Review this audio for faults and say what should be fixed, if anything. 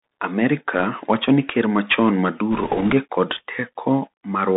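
The speech is boxed into a narrow telephone band from the start, with nothing audible above 3.7 kHz, scratchy s sounds and a grainy hiss underneath. This is the Bluetooth CVSD headset codec: its one-bit up-or-down steps at 64 kbps cannot track fast, bright detail. Recording through a wideband path, such as mSBC headset mode or a wired microphone, would avoid it.

From 2.52 to 2.93 s, just after "wacho ni ker machon", a rushing, crackly noise spreads over the speech without any sharp clicks. These are bit errors on a Bluetooth voice link, at a rate of roughly 3 percent. Each flipped bit nudges the waveform slightly and fades, so the damage builds as texture. Keeping the headset close to the receiver, away from Wi-Fi and other 2.4 GHz interference, would prevent this.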